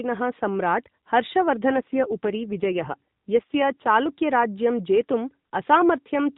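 Narrowband mobile speech, band-limited to 4 kHz, with an AMR rate drop from 1.68 to 3.88 s. The voice turns rougher, buzzier and more synthetic over that span, with no gap and no change in bandwidth. This fits the AMR-NB codec being switched from its 12.2 kbps mode down to the 5.9 kbps mode, so fewer bits describe the vocal tract and excitation pulses. Quality recovers to the lighter 12.2 kbps character once the higher rate returns.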